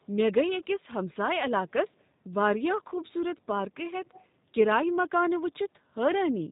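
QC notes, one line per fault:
Throughout: G.729 codec. The speech is plainly rebuilt from a vocal tract filter, a pitch predictor and a few pulses per frame, so it comes across rough and slightly synthetic, with nothing above 4 kHz, which fits a G.729A stream at around 8 kbit/s.
2.90 to 2.95 s: VoIP packet loss concealed by the speech codec. About 20 ms of audio went missing, consistent with a single lost packet. The decoder filled the gap by stretching its last pitch and filter, so the speech turns briefly into a buzzy tone or coloured noise and fades before recovering.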